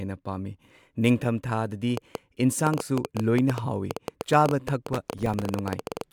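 From 1.97 s to 6.02 s the speech is overlaid by a train of clicks, roughly forty in all at about 9.2 per second, spaced irregularly. Each pulse has much the same shape and peaks around 10 dB above the speech, so the ticking cuts through the talk and the pauses alike. The likely source is interference from nearby equipment or a faulty connection or power supply injecting the same impulse over and over.

Between 4.93 s and 5.48 s, while the clicks continue, processor overload crackle sets in. The processor falls behind and misses a run of roughly twenty buffer deadlines, each gap short enough to fit a buffer of around 1.5 ms. Every missed buffer is left as silence with hard edges. Packed together, these dropouts produce a gritty, tearing crackle over the speech that stops once the load eases.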